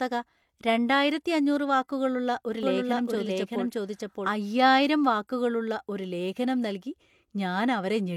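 Speech, with a doubled audio track from 2.63 to 4.29 s, just after "രണ്ടായിരത്തി അഞ്ഞൂറ് വാക്കുകളുള്ള ഒരു": an equally loud full-band copy trails roughly 0.7 s behind, likely a second capture path. Unlike an echo, it starts and stops abruptly, without decay, ending before "അയ്യായിരം വാക്കുകളുള്ള ഒരു ലേഖനം".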